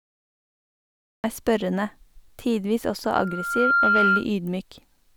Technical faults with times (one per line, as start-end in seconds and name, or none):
0.00-1.24 cut-off start
3.04-4.26 loudspeaker feedback squeal